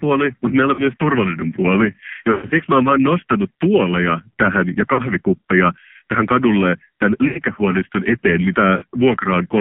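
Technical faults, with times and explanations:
throughout: AMR narrowband mobile codec. The speech was squeezed through AMR-NB at a low mode, which fits about 5.9 kbps, so a vocal-tract model driven by sparse pulses rebuilds the voice with little detail. The line passes only about 150 Hz to 3.4 kHz, leaving it thin and muffled, and the heavy coding damage gives a buzzy, synthetic edge to every syllable.
0.74–0.82 s, 2.32–2.63 s, 4.94–5.05 s, 7.28–7.40 s, 8.78–8.84 s: lost AMR speech frames. Corrupted frames failed their check, so the decoder repeated the last good pitch and spectral shape at falling gain. The short gaps of about 40 ms, after "mutta meillä" and at 4.94 and 8.78 s, give brief warbling dips. The 80 ms loss after "tähän kadulle tämän" smears and fades. Between "turvallinen puoli" and "mä oon vaan nostanut", losses scattered over 280 ms, with a 120 ms run, drag toward silence before the voice returns rough.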